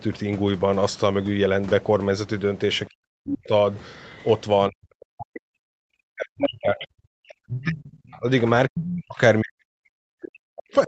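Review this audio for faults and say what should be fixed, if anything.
Speech suppressed in double talk from 2.89 to 3.52 s, 4.69 to 8.27 s, and 8.69 s to the end: the talker's speech drops by up to about 40 dB. This is likely an echo canceller turning down both sides while both talked at once. On a waveform the envelope collapses, and on a spectrogram the harmonics fade or break into fragments.

Other side's voice leaking through at 6.42 to 6.5 s, 7.63 to 8.2 s, and 10.6 s: brief second-voice scraps appear, ranging from nearly speech level to faint. This is likely residual loudspeaker echo. On a spectrogram they show as harmonic traces that don't follow the main voice.

To prevent both, use a stronger echo canceller with better double-talk detection and a well-converged echo path, or have the talker use a headset.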